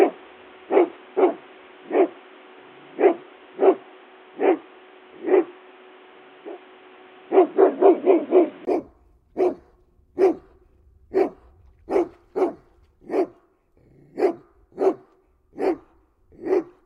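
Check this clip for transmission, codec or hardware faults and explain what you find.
One fault is present. From the start to 8.67 s, the audio is band-limited, with nothing above 3.8 kHz. It sounds dull and boxy. A faint extra noise floor sits well below the signal. At 8.67 s there is a brief gap of about 20 ms. The full bandwidth then returns, with a small level jump. This is likely an input switched to a poorer device, such as a headset call profile, which passes a narrower band and adds its own noise.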